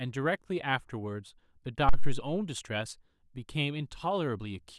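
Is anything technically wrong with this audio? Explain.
Yes. At 1.89 to 2.26 s, a phantom power thump: the supply switching on or off on a live input sends a step through the coupling capacitors, giving a deep thump peaking at about -12 dBFS and decaying within 85 ms. It is a single clean low pulse, unlike the irregular rumble of handling noise.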